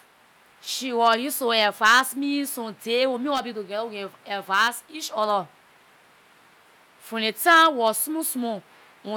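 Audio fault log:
No faults heard anywhere in this speech recording.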